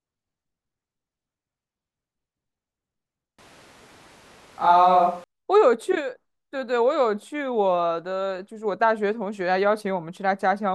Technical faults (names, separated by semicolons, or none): switch to a distant microphone